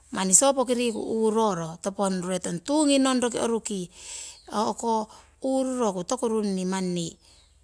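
Speech recording with no technical faults to report.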